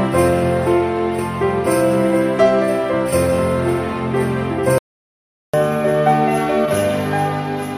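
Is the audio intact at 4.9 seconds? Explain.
No. At 4.9 seconds the clip is in the middle of a playback stall running from 4.78 to 5.54 s, about 0.75 s of silence. The sound cuts off abruptly mid-flow and then picks up again, most likely because the player ran short of buffered data or its output thread was held up. On a waveform this appears as a flat line between two active stretches. On a spectrogram it is an empty vertical band with hard edges.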